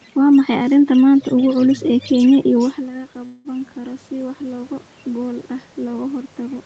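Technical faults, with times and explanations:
2.57–6.65 s, automatic gain rising: voice and room noise swell together as the gain control slowly compensates for an input drop of about 13 dB.
3.25–3.48 s, call audio freeze: the last sound carries on, fading, for about 190 ms, then resumes with nothing lost, likely from late packets emptying the jitter buffer.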